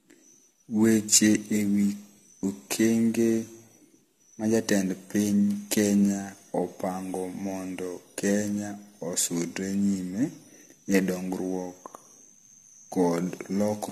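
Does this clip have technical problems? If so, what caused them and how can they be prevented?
Yes: the speech has generation loss throughout, with a swirling, hollow smear, blurred consonant attacks and nothing above 14.2 kHz. Unlike a single low-bitrate encode, the artefacts sound compounded, likely from about seven AAC passes on shifting frame grids, fitting 64 kbit/s each. Prevent it by editing from a lossless master and encoding only once at the end.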